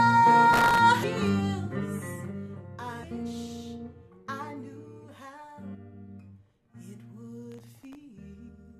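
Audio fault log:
0.53–0.78 s and 7.52–7.95 s, processor overload crackle: a gritty tearing rides on the sound while the processor keeps missing its deadlines. The crackle is denser in the first run. Each missed buffer replays a sliver of old audio with hard edges, and the spacing points to buffers well under a millisecond long. On a waveform the runs show as rapid step discontinuities. A spectrogram shows a dense haze of thin vertical broadband lines that stops abruptly when the load passes.
1.02 s, 3.02 s, 5.74 s and 8.48–8.50 s, damaged data in a compressed stream: four short glitches, each about 20 ms. Corrupted bytes make the decoder misread or drop frames, lose sync and hunt for the next valid header. The spectrogram shows each as a brief smear of unrelated tonal or noisy energy followed by a clean resumption. The waveform shows a short burst of foreign shape and a small discontinuity.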